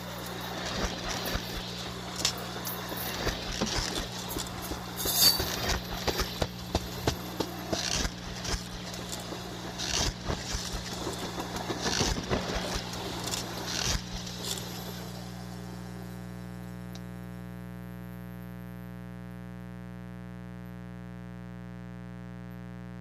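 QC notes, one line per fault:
Throughout, mains buzz: a steady, raspy buzz sits under the whole clip, fairly prominent at roughly 10 dB below the sound itself. It's built on 60 Hz, so the supply is the 60 Hz kind, but it isn't a clean hum. Sharp switching spikes, from a dimmer, a rectifier or a missing shield, get in twice per mains cycle, and that spiky shape stacks up harmonics reaching several kHz. Those harmonics are what give it the rasp.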